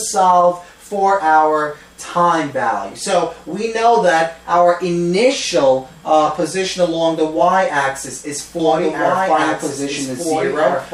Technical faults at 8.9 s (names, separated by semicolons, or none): doubled audio track